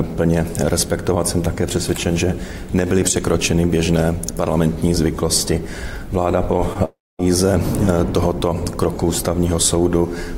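A short concealed packet loss at 6.73 to 6.77 s leaves a brief smear: about 20 ms of audio missed the decoder, and the gap was patched by extending the preceding sound. A long network dropout at 6.85 to 7.21 s is likely the cause of a fading buzz or hiss continuation followed by about 230 ms of silence, with roughly 340 ms of audio never returning before playback resumes.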